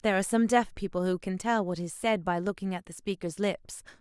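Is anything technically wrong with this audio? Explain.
No, nothing technically wrong turns up anywhere in this speech recording.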